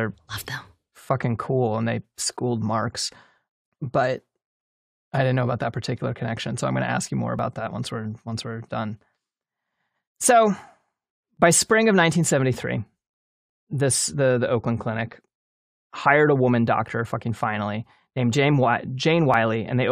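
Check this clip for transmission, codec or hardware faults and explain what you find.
The speech has one transmission fault, an overlap between stream segments, heard three times. At 7.39 s (after "to ask you more", before "that once"), 11.37 s (just before "by spring of") and 19.34 s, adjacent segments' timestamps overlapped, so the player trimmed 12 to 17 ms of audio that wasn't actually duplicated. Each spot gives a click or tiny skip where the waveform jumps. The spacing fits 4-second segments.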